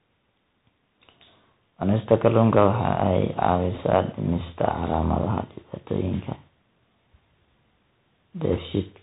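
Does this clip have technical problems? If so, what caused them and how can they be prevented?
Yes. The speech passes throughout through a Bluetooth CVSD headset codec, which fits a 64 kbps CVSD link. Everything above 4 kHz is missing, sibilants sound scratchy, and granular hiss underlies the speech. Use a wideband headset profile (mSBC or LC3) instead of narrowband CVSD.

Bit errors on a Bluetooth voice link cause brief rushing crackle at 3.75–3.82 s and 8.53–8.59 s, with no loud clicks, consistent with an error rate around one percent. Reduce radio interference and keep the headset close to the host to limit link errors.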